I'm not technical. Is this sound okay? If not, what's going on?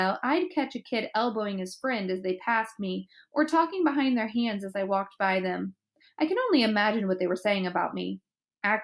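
Yes, nothing in this sound stood out as a problem when I listened to it.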